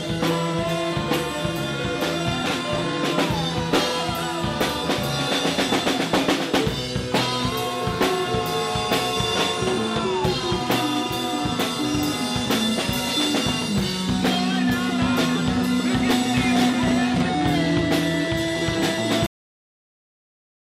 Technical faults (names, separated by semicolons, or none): cut-off end